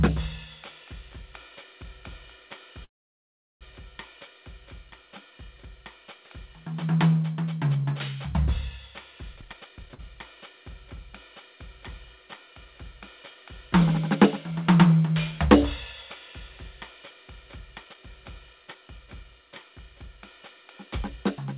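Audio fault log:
2.84–3.63 s, call audio freeze: the music stops for about 0.77 s, mostly in silence, then resumes where it stopped. Delayed packets likely emptied the jitter buffer.
9.34–9.90 s, jitter buffer speed-up: the music rushes at 178% speed with unchanged pitch. Around 0.4 s of short pieces were cut to shrink a swollen buffer.
9.94–10.00 s, short stall from a late packet: the last sound is held 40 ms too long while a packet arrives late. Nothing is lost.
17.80–20.18 s, jitter buffer speed-up: the music runs at 115% speed with steady pitch. The tempo drifts because roughly 0.4 s is trimmed to cut excess delay.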